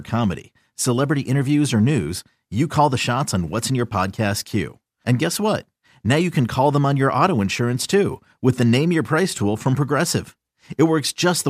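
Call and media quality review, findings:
No faults found in the speech clip. Nothing heard calls for a ticket against any component.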